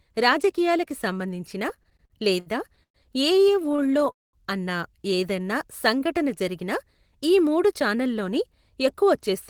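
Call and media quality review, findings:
Repeated stalls (stutter), 1.69–2.97 s: jitter buffer repeatedly starved by late packet arrival. Nine gaps filled by continuing the last sound, longest 113 ms, about 0.29 s inserted. Speech drags and stutters, nothing lost.

Repeated stalls (stutter), 3.48–4.09 s: same buffer underrun pattern, nine shorter gaps, longest 21 ms, about 0.1 s filled. Quicker, finer hitching in the speech, no audio missing.

Call audio freeze, 4.12–4.36 s: packets held up in transit, likely network delay, buffer ran dry. Last sound extended then silent for 0.2 s; playout delay grows by 211 ms. Speech resumes where it stopped.

Jitter buffer slow-down, 5.37–6.44 s: receiver rebuilding reserve by repeating single pitch periods. 57 ms added, speech at 95% speed with pitch unchanged. Sounds drawn out.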